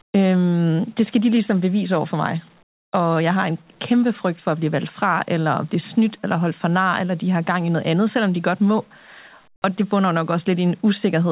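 At 0.02 to 0.14 s and again at 2.63 to 2.93 s, the real background drops out and comfort noise takes its place: a steady, featureless hiss, about 2 dB louder in the first gap and about 5 dB quieter in the second. The likely cause is discontinuous transmission, with the receiver synthesizing noise during pauses. On a spectrogram these stretches show smooth, uniform texture capped at 4 kHz, like the rest of the narrowband call. The waveform shows an even, flat noise floor.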